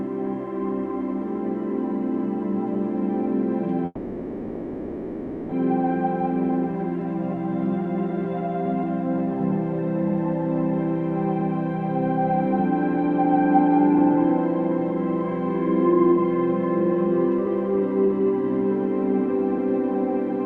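A long network dropout, likely, runs from 3.85 to 5.53 s. The last sound is stretched into a fading buzz or hiss for about 1.66 s, then briefly falls silent. Playback resumes with about a second of audio gone, leaving a jump.

Jitter buffer speed-up follows from 15.89 to 18.37 s and again from 19.13 to 20.32 s. The receiver trims short pitch-period slices to shed the excess stored audio, roughly 0.3 s, then a few hundredths. The sound hurries at 112% and then runs at 103% speed without changing pitch.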